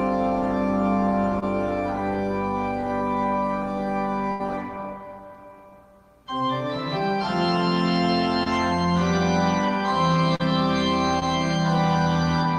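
At 1.39 to 1.44 s there is a short concealed packet loss: about 20 ms of audio failed to arrive in time, and the decoder covered the hole with 24 ms of extrapolated signal, carrying on from the preceding waveform before crossfading back into the received stream. The result is a brief smear or wobble rather than a clean dropout.

At 4.32 to 4.41 s a burst of packet loss removes about 80 ms in a run. The concealment stretched the last received sound across 76 ms and attenuated it as the gap lengthened, which heard as a held buzz or fading hiss. Playback then resumes later in the material, with the intervening section gone.

The same short concealed packet loss recurs three more times. At 8.43 to 8.48 s it covers about 20 ms with 23 ms of fill. At 10.36 to 10.41 s it covers about 40 ms with 37 ms of fill. At 11.19 to 11.23 s it covers about 20 ms with 19 ms of fill.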